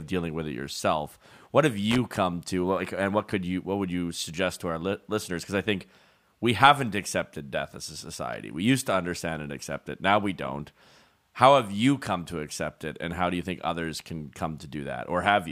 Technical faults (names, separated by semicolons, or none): loose connector crackle